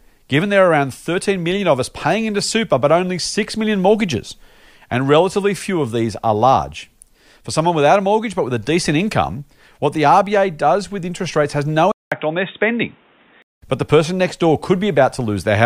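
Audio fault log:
11.92–13.62 s, input switched to a poorer device: after a 200 ms gap the speech goes boxy, nothing above 3.8 kHz, with faint new background noise, likely a headset or other mic taking over.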